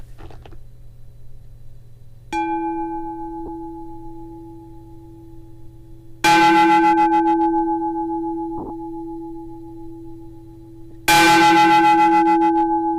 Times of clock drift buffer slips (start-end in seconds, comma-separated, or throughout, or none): none